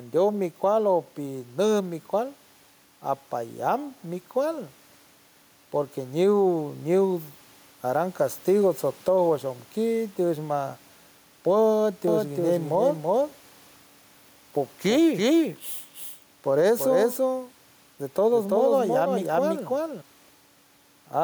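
Gain pumping runs through the whole speech clip. The level swings by roughly 5 dB, so quiet and loud passages sit unnaturally close together and the delivery sounds squashed. The likely cause is input gain set too high with a fast limiter or compressor pulling it down on each peak. The room noise sits about 38 dB below the speech.

From 12.08 s to 20.02 s a doubled audio track appears. A second, full-bandwidth copy of the speech trails the original by around 300 ms at a level somewhat lower, on the order of 5 dB down. It has no reverberant tail or room colouring, and it cuts in and out abruptly at both ends. This likely comes from the signal being captured again through a slower path, or from an edit that left two misaligned copies.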